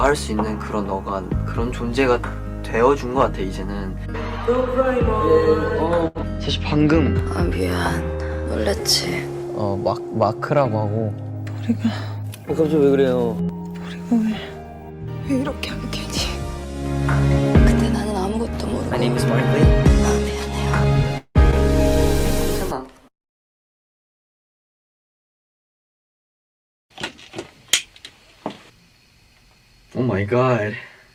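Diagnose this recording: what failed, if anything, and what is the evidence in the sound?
Network stage, short stall from a late packet: at 6.07 to 6.18 s the sound holds about 74 ms too long while the empty jitter buffer stretches the last sound.

Network stage, call audio freeze: from 21.18 to 21.38 s the sound turns to a fading buzz or hiss, then roughly 60 ms of silence, before resuming. The likely cause is packets held up in transit.

Network and decoder stage, short concealed packet loss: at 21.51 to 21.55 s a brief smear of about 15 ms stands in for about 40 ms of lost audio, synthesised from the preceding sound.

Jitter buffer, speed-up: from 29.99 to 30.64 s the sound runs about 6 percent fast at unchanged pitch, as roughly 50 ms of pitch periods are trimmed.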